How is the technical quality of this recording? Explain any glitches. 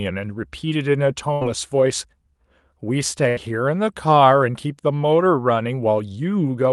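The recording has two short glitches, both a burst of packet loss. It came through a call path. Nothing can be heard above about 12 kHz, which fits the Opus codec used for calls.

The first runs from 1.33 to 1.43 s and the second from 3.29 to 3.39 s. Each time, about 80 ms of audio never arrived in time. The receiver covered the gap for about 75 ms by stretching the last sound and fading it down. That leaves a brief held buzz or fading hiss in place of the speech. Speech then picks up further on, with that stretch missing.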